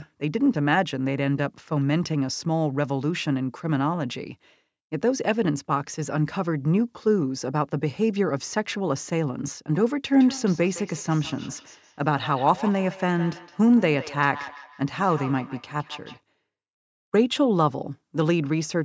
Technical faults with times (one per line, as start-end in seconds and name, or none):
10.20-16.23 feedback echo between two devices